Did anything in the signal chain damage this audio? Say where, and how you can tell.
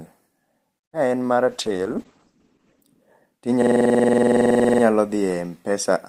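Yes. From 1.49 to 2.89 s the speech turns muffled and rough. That is a call bitrate drop at the codec stage. The encoder fell from 32 to 9 kbps, and the audio band narrowed from 20 kHz to 8 kHz. It recovers by 2.89 s.

From 3.62 to 4.83 s a 46.44 ms piece of speech repeats 26 times. At 21.5 Hz it sounds like a machine-gun stutter. This is a system hang loop at the driver or buffer stage. The hardware kept replaying its ring buffer, which fits a 2048-sample buffer.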